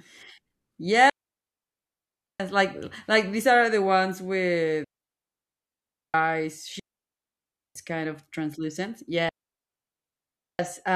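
Digital wireless dropouts cut this speech at 1.10 to 2.40 s, 4.84 to 6.14 s, 6.80 to 7.76 s (ending just before "kind of translucent") and 9.29 to 10.59 s. The receiver mutes after losing data, leaving clean holes of near silence with no noise burst, unlike analog dropouts.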